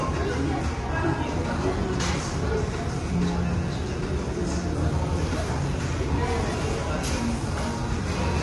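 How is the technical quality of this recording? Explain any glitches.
The quality is held back by clearly audible compression from start to finish. Throughout the clip there's a grainy, rough texture to the sounds, with a hiss filling in around the tonal parts, and nothing at all above about 11.6 kHz. That's likely low-delay AAC compression, the AAC-ELD kind used on video calls. Its short frames can't separate closely spaced harmonics cleanly, so noise leaks between them, and the damage level here fits a bitrate around 32 kbps.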